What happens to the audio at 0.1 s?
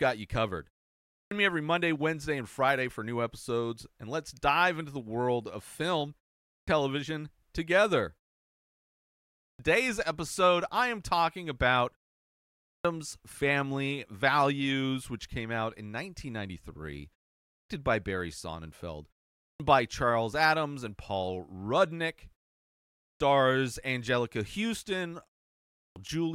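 Nothing goes wrong at 0.1 s; the speech recording is intact at that moment.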